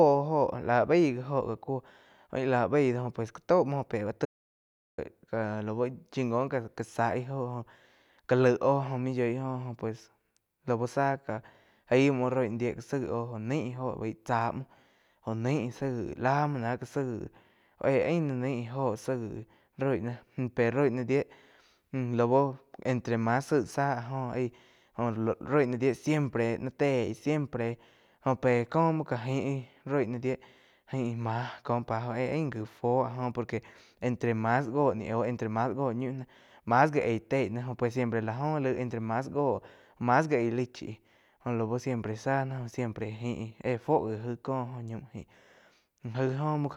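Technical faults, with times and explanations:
4.25 to 4.98 s, audio dropout to silence: the input was likely lost for a moment, through a disconnect or stray mute, while the recorder kept writing silence. The speech cuts off abruptly into about 0.73 s of silence with no room tone, and whatever was spoken there is gone.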